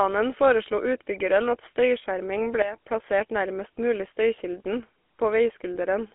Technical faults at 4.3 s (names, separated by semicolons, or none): GSM full-rate codec